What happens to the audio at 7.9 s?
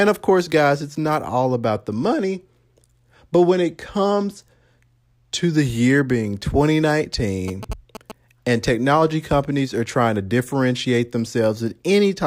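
A nearby 2G phone is signalling, and the audio circuit rectifies its radio bursts as GSM signalling bursts from 7.48 to 8.12 s. This adds a galloping dit-dit-dit of short 217 Hz buzzes, roughly 10 dB under the speech.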